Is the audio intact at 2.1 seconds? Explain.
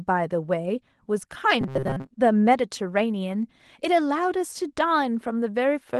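No. Robotic sound from repeated short buffers runs from 1.61 to 2.11 s, so 2.1 s falls just inside it. The speech there turns into a rigid, metallic buzz pitched at 133 Hz, which still roughly follows the words. That points to a likely cause of new audio arriving too slowly, with the playback filling each gap by replaying the last 7.5 ms or so. About half the material is repeated rather than fresh.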